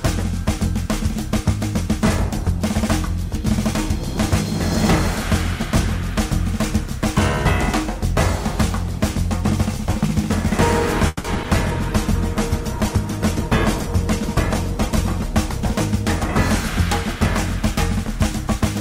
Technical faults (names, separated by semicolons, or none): call audio freeze; short concealed packet loss; skip ahead; call bitrate drop